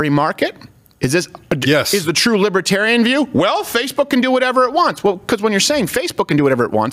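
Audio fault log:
throughout gain pumping: the level swings by around 10 dB. Loud and soft passages sit close together and sound squashed, likely from input gain set far too high and a fast limiter clamping down.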